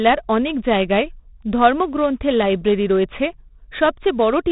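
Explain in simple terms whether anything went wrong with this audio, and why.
4-bit ADPCM compression runs throughout the speech. Each sample is stored as a coarse step from a guess, leaving heavy gritty hiss and nothing above 3.8 kHz.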